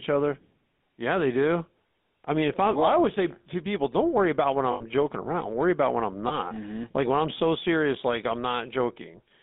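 A speech recording carried over a GSM full-rate codec throughout. It has the characteristic buzzy, gravelly roughness of that codec, and the damage is plainly audible. The codec models the vocal tract with a short-term filter and drives it with a sparse train of regularly spaced excitation pulses, so the fine detail of the original waveform is lost. The sound is consistent with the 13 kbps full-rate coder. The audible band runs from roughly 200 Hz to 3.6 kHz, which is a narrow telephone-line bandwidth with nothing reaching up toward 4 kHz. Lost GSM frames occur twice. The first runs from 4.72 to 4.84 s, between "don't worry about when" and "joking around". The second runs from 6.28 to 6.37 s, right after "about when I'm". At each dropout the decoder fills the gap by repeating the parameters of the last good frame. This produces a held, rough, metallic ring instead of new speech. The first gap sounds like about 80 ms of concealed audio, which fits four consecutive 20 ms frames. 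The second is shorter and fits a single frame.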